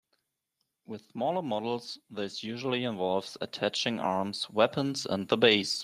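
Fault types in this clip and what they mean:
Automatic gain rising: from 0.85 to 5.39 s the gain control boosts a quiet input by about 13 dB, so speech and background swell together.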